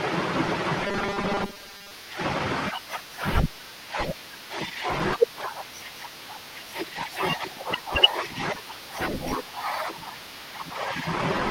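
Robotic sound from repeated short buffers appears in this speech clip from 0.86 to 1.92 s, where the voice collapses into a rigid, metallic buzz at 200 Hz that loosely tracks the talking. The likely cause is audio arriving too rarely, so playback fills the gaps by looping a tiny fragment, about 5 ms long to match that buzz, while roughly half of the real signal is skipped.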